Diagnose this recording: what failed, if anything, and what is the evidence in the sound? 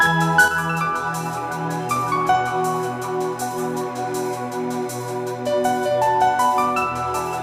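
A sudden gain jump at 0.48 s drops the level by about 6 dB for the rest of the clip. The sound and background noise fall together, in one step with no fade. The likely cause is a digital gain change or one-bit shift, applied without a ramp.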